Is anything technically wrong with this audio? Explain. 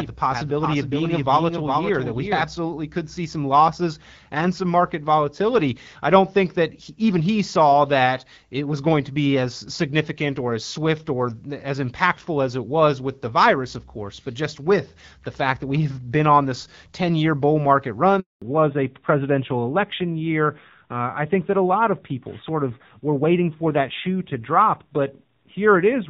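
Yes, three faults can be heard in this speech clip.

From the very start until 2.42 s, every sound is followed by a second, full-band copy of itself roughly 400 ms later and about 5 dB quieter. The repeat has no reverberant tail or room colour, so it is not an echo from the space. It is a doubled audio track, most likely the same signal arriving again through a slower capture path. At 2.42 s the copy stops abruptly.

At 18.20 s the speech dies away within a few tens of milliseconds, and there is silence until 18.42 s, a 220 ms hole. This is a handover gap. The phone was switching the call between networks, and no speech frames arrived while the new link came up, so whatever was said during that stretch is simply missing rather than muffled.

From 18.42 s to the end, the speech sounds duller and rougher, with nothing above 4 kHz. Before the gap, the HD Voice wideband codec carried content up to about 7 kHz, with only light coding damage. 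This is a fallback to narrowband: after the handover, the call dropped to an older narrowband codec. The harsher texture fits a rate of around 7.4 kbit/s.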